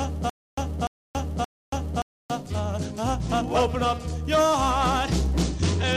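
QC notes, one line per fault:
0.00–2.30 s, stutter with silent gaps: already under way at the start, a 0.30 s fragment of audio repeats at an even 0.57 s pace with 0.28 s of dead digital silence between repeats, three times over. This is likely a stalled player or stream replaying its last buffered chunk at each retry. The audio that should have filled those gaps is lost.
5.43–5.97 s, Bluetooth SBC bit pool drop: the treble suddenly dulls and a gritty, coarse noise rises under the sound through to the end. It fits the SBC bit pool falling from 28 to 11, near 90 kbps, which starves the upper sub-bands and quantises the rest roughly.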